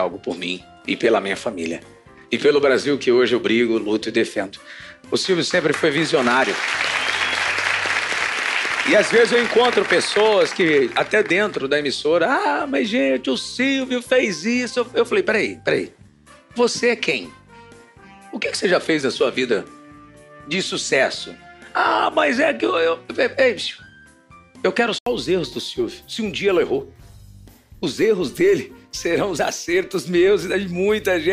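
From 0.0 to 25.06 s the sound is band-limited, with nothing above 11.4 kHz and a faint noise floor roughly 55 dB down. An 80 ms gap at 25.06 s, then full bandwidth, points to an input switched to a poorer device, likely. A spectrogram shows a flat ceiling, then a gap.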